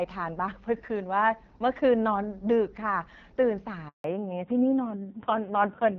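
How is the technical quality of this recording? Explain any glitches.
The recording has two clear glitches late in the clip, both typical of a mobile call changing networks. Until then the speech has the light coding texture of AMR wideband (HD Voice), consistent with its 12.65 kbit/s mode.

From 3.88 to 4.04 s there is a handover gap. The speech cuts out quickly and stays silent for 160 ms. The call was being passed from one network link to another, no speech frames arrived during the switch, and whatever was said in that moment is gone.

From 4.04 s to the end, the audio shows a fallback to narrowband. It sounds duller and rougher, with nothing above 4 kHz. After the handover the call dropped from HD Voice to an older narrowband codec, and its coarse texture fits AMR-NB at a low 5.9 kbit/s rate.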